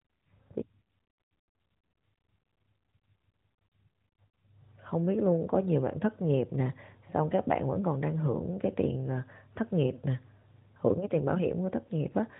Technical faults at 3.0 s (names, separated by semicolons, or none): none